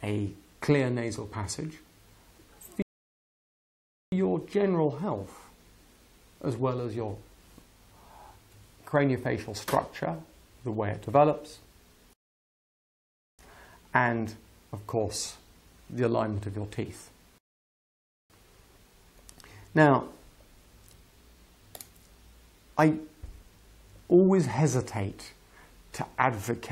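At 2.82 s, 12.13 s and 17.38 s the playback halts in rebuffering stalls of 1.3 s, 1.26 s and 0.92 s: the player drained its downloaded audio and waited for more. Each gap is silent, then the sound resumes exactly where it stopped, with nothing skipped.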